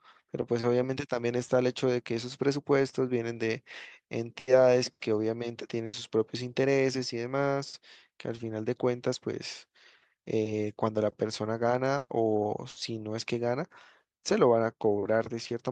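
Speech carried over a WebRTC call path whose Opus coding rolls off above about 12 kHz, with two kinds of loss. Four bursts of packet loss occur at 4.39–4.49, 5.85–5.95, 11.97–12.11 and 12.69–12.77 s. In each, the receiver stretches the last sound for 80, 80, 120 and 60 ms into a held buzz or fading hiss, and the third includes 20 ms of silence. Speech then resumes further along with that stretch gone. Two instances of short concealed packet loss, at 8.35–8.39 and 15.03–15.07 s, are different. Only about 20 ms is patched from the preceding pitch or shaped noise before blending back. They register as a quick smear or wobble rather than a sustained tone followed by a jump.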